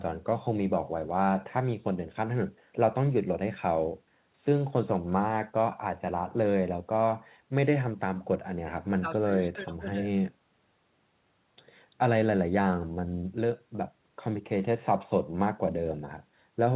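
Nothing stood out on listening to this speech clip.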